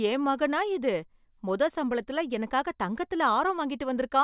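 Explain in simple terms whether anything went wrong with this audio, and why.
Nothing went wrong; this speech recording has no faults.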